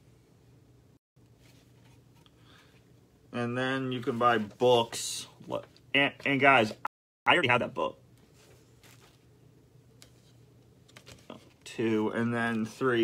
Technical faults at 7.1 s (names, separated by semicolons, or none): playback stall